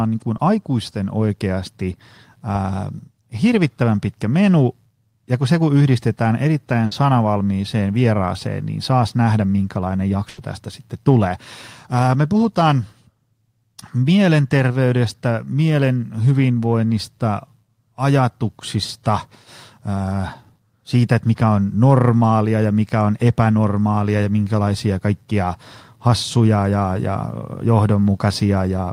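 Speech recorded over a packet-based call link shows one short concealed packet loss and two bursts of packet loss. The short concealed packet loss sits at 0.37 to 0.41 s. About 20 ms of audio failed to reach the decoder in time, and the receiver patched the hole by extending the preceding sound before blending back into the real signal. The result is a brief smear or wobble right at the start of the clip. The bursts of packet loss occur at 6.85 to 6.93 s and 10.29 to 10.39 s, and they remove roughly 60 ms and 80 ms of audio respectively. In each, the receiver carried the last sound forward and faded it down across the gap. The sound then resumes further along, so the section in between is missing and the flow jumps.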